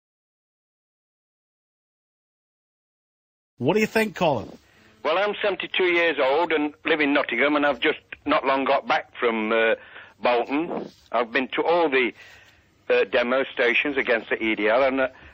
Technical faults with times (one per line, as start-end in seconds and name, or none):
none